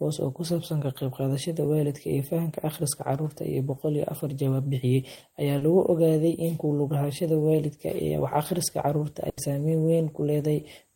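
At about 5.57 s there's a short concealed packet loss: roughly 40 ms of the speech didn't reach the decoder in time, so the receiver patched the hole by carrying the last sound forward, voiced from its pitch or as shaped noise, and then eased back into the real signal. You hear it as a quick smear or wobble through about 5.63 s, and anything very brief in that spot can simply drop out.

Later, from about 9.29 to 9.39 s, comes a burst of packet loss, a bigger gap where roughly 80 ms went missing in one run. The receiver stretched the last sound across it and turned it down as it went, so you get a held buzz or a fading hiss instead of real speech. When the audio picks back up, it's further along, and whatever was said in that stretch is gone.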